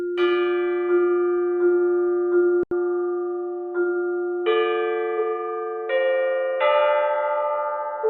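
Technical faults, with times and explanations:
2.63–8.09 s, input switched to a poorer device: after a gap of about 80 ms the sound turns dull and boxy, with nothing above 3.8 kHz, a faint new noise floor far below the signal, and little level change, likely from capture moving to a narrower-band device.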